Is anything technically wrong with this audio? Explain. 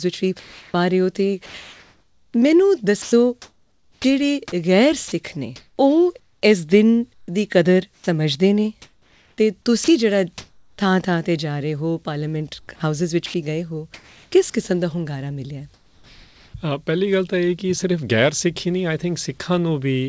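Yes. The sound is chopped by the voice detector from 0.40 to 4.04 s, 5.08 to 10.78 s and 12.60 to 14.54 s. Roughly 1.9 s, 1.7 s and 0.6 s of those stretches are swapped for synthetic fill as transmission likely switches on and off repeatedly. Quiet edges vanish. Unlike packet dropouts, the gaps hold noise rather than silence.

From 15.74 to 16.54 s, comfort noise takes the place of the background. During a pause sent as discontinuous transmission, the receiver likely generated 0.8 s of smooth noise about 4 dB quieter than the real background, which sits about 34 dB below the loud parts. This differs from the chopping because it is one steady patch with no flicker. Throughout the clip, nothing is heard above 8 kHz, which fits a G.722 call codec.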